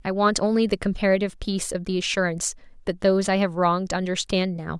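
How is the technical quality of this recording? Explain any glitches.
The technical quality holds up, with no audible glitches anywhere in the recording. Nothing in it calls for an explanation.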